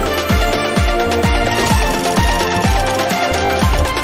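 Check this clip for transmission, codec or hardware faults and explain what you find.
One transmission fault is present: repeated frames, from 3.45 to 3.49 s. A single compressed block of about 20 ms was delivered to the decoder again and played two extra times, which fits a single 20 ms frame being duplicated in the stream. The decoder has no way to tell the copies are stale, so it renders the same slice of sound three times in a row. The result is a brief stutter that adds about 40 ms to the clip.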